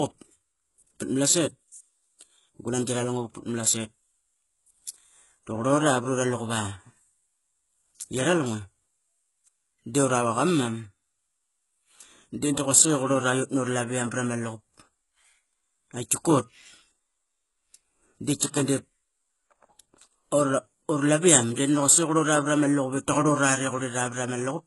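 Throughout the speech, the treble is likely rebuilt by HE-AAC compression's band replication at a very low bitrate, near 12 kbps. Sibilants turn gritty and metallic, with nothing above 11.5 kHz.

At 18.40 s, pre-echo appears: the codec spread quantisation noise across its block, so a brief hiss of about 14 ms precedes an attack, softening it.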